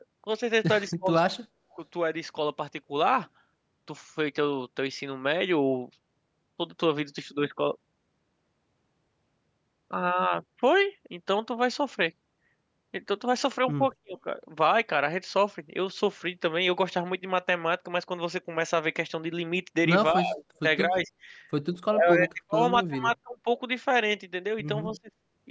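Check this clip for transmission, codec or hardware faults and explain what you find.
Two faults are present: repeated speech suppression and one brief echo leak. Speech suppressed in double talk occurs at 0.89–1.11, 1.76–1.80, 14.02–14.15, 20.16–21.09, 21.75–23.47 and 24.93–25.13 s. The voice dips sharply, by roughly 30 to 40 dB, with a shallow dip at 1.76 s. The likely cause is an echo canceller that mistook overlapping talk for loudspeaker echo and turned the voice down. Echo leak occurs at 24.90–24.98 s: a faint copy of the voice, about 25 dB down, trails 232 ms behind. This is likely loudspeaker sound that the far-end canceller failed to remove.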